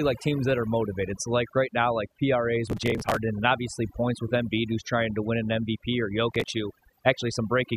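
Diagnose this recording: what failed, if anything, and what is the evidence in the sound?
Overdone noise removal, a call-processing stage, runs through the whole clip: the background is pushed to near silence dotted with twinkling specks. The suppressor gates individual bands near its noise estimate, which a spectrogram shows as scattered isolated blobs between syllables and ragged, hollowed-out harmonics.

Processor overload crackle, at the driver or buffer stage, tears through the sound from 2.67 to 3.17 s, between "like right now like" and "and obviously points with", and again from 6.31 to 6.48 s. Missed deadlines skip whole buffers, with a spacing that points to buffers of around 5 ms. The waveform shows dense hard-edged discontinuities, and the spectrogram shows vertical broadband streaks.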